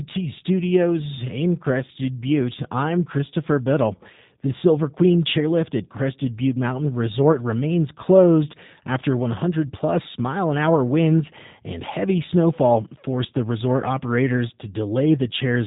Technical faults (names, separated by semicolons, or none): G.729 codec